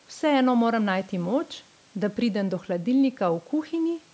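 The speech carries no technical faults: the call microphone processing works as intended, with the lowest bass removed and nothing above 8 kHz, and the room noise sits about 37 dB below the speech.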